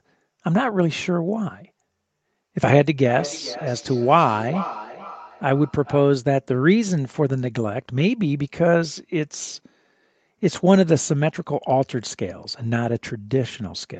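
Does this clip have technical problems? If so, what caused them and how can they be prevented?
Yes. From 2.98 to 6.23 s there is feedback echo between two devices. The speech returns roughly every 0.4 s, thin and ringing, peaking about 13 dB below the speech. A nearby device replays the call into this microphone. Use headphones, or mute that device.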